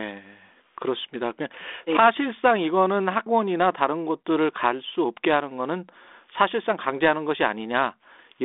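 Nothing here counts as a fault: the speech comes over a G.726 link at 32 kbit/s, with the narrow telephone band running from about 250 Hz to 3.6 kHz, nothing above 3.8 kHz, and only light coding texture from the codec, all of which is just how that kind of line normally sounds.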